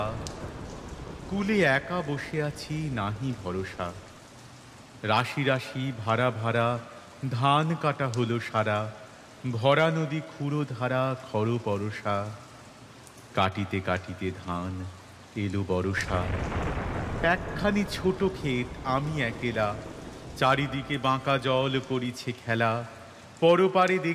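No technical faults can be heard anywhere in the audio; the signal stays continuous and steady throughout.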